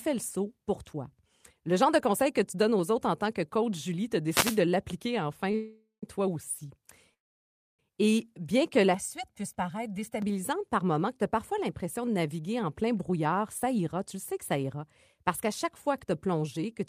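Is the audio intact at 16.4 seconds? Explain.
No. At 16.4 seconds the audio is inside a jitter buffer speed-up running from 12.39 to 16.81 seconds, just after "as parfois l'impression de". The receiver's buffer had built up more delay than its target. To shed it, the receiver cut out many short slices, each one or a few pitch periods long. Roughly a third of a second goes missing. The speech plays about 6% faster at unchanged pitch and sounds hurried.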